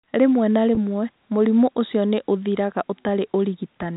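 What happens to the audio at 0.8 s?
Just before 0.8 s, a packet loss with pitch repetition runs from 0.75 to 0.77 s. About 20 ms of audio never reached the receiver, which fits two consecutive packets going missing. The receiver filled the hole by repeating the last pitch period it had. Because the gap is so short, it sounds like a brief held, slightly buzzy catch in the speech rather than a silence. By 0.8 s the speech has resumed.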